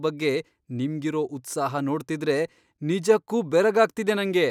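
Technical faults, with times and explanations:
Nothing in this speech recording stood out as a technical problem on listening.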